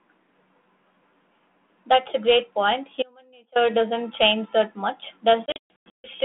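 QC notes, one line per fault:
3.03–3.56 s: audio dropout to a faint residue. The signal vanishes abruptly for 0.53 s, leaving a faint leak about 30 dB down, likely a break upstream with the path still live.
5.46–6.14 s: packet loss on an ADPCM call. About 420 ms of the 32 kbit/s G.726 stream is lost across 580 ms, with the longest hole 140 ms. The gaps are hard-edged and silent. Afterwards the decoder's predictor and step size no longer match the sender's, so speech returns slightly distorted.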